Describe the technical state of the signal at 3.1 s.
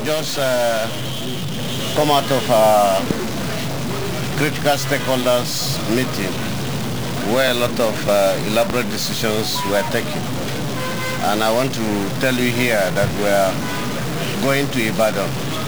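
At 3.11 to 3.13 s a single loud pop rises roughly 15 dB above the signal, likely a voltage step from a switch or static discharge, with the sound continuing underneath. Throughout, including this moment, a stuck bit gives harsh, buzzy distortion and noise in quiet passages, likely from a fairly high-order converter bit held fixed.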